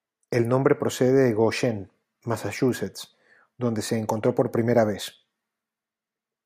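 No technical faults can be heard anywhere in the speech, and the signal stays continuous and stable throughout.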